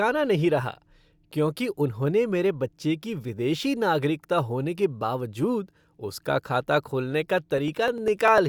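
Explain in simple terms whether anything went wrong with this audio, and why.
Near the end, from 7.28 to 8.38 s, right after "उसका खाता खोलने", the speech picks up a string of about ten evenly spaced ticks, one roughly every 0.1 s. These are periodic USB or driver dropouts. Something repeatedly stalled the audio connection, and each time a sliver of sound, well under a millisecond, was skipped. Random crackle would be irregular, but these ticks keep a steady rhythm and occur only where there is sound.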